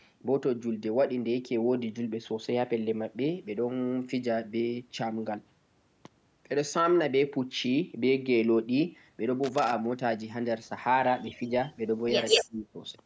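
Speech clip with three kinds of fault. From 9.44 to 9.73 s there is loose connector crackle, an irregular scratchy burst that sounds mechanical and bears no relation to the speech. An echo leak follows: a copy of the voice about 181 ms late, very faint at 11.32 to 11.39 s and slightly louder than the speech at 12.29 to 12.42 s. That fixed lag likely marks it as a leaking echo canceller rather than room reverberation. From 12.4 to 12.77 s the voice is pulled down very deeply, over roughly 0.4 s. This is speech suppressed in double talk, likely the canceller ducking both sides at once, and it differs from a dropout because the dip follows the overlapping talk. Throughout, the call microphone processing limits the band to 8 kHz.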